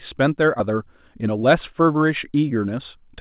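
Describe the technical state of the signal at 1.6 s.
At 1.6 s the speech is inside a jitter buffer speed-up running from 0.70 to 3.18 s. Excess buffered audio is being drained by cutting out short pitch-period slices, about a fifth of a second in all. The speech plays about 7% faster at unchanged pitch and sounds hurried.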